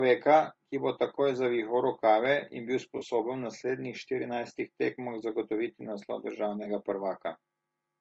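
Across the whole speech clip the sound is rough and grainy, with noise filling the gaps between pitch harmonics and a thin, synthetic-sounding top band. This is likely low-delay AAC compression (AAC-ELD), and the damage fits a bitrate around 32 kbps. On a spectrogram the harmonic lines look blurred, with speckled noise between them.

At 2.97 s, after "zavihal rokave in bil", an AAC frame loss with concealment leaves a 40 ms smeared, noisy patch running to 3.03 s. At 6.63 s, after "štirinajstih tekmah zagotoviti naslov", a 20 ms loss does the same. The decoder filled each gap from the last good spectrum, so the spectrogram shows a short stretch where the harmonic lines are held flat and smeared.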